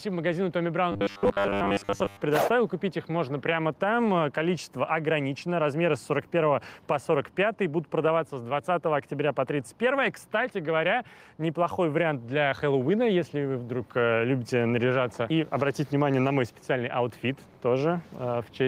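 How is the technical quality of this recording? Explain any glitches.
The recording has two audible problems: level pumping that runs through the whole clip, and a short stretch of robotic buzzing near the start.

Gain pumping is present from start to finish. The level is pulled down each time a loud sound arrives, a swing of roughly 5 dB. The likely cause is input gain set far too high, with a fast limiter or compressor clamping down on every peak. Loud and soft passages end up squeezed together. Unlike noise that simply fades in and out, the breathing here is tied to the loud moments themselves.

From 0.92 to 2.22 s there is robotic sound from repeated short buffers. The audio turns into a rigid, metallic buzz pitched at 100 Hz that still loosely tracks the overall contour. A 100 Hz buzz fits a block of about 10 ms being looped over and over, likely because fresh audio was arriving too slowly and the gap was filled with repeats. 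Most of the real material in that span is lost. A dropout would leave silence, but here the sound keeps going with a fixed, unnatural pitch.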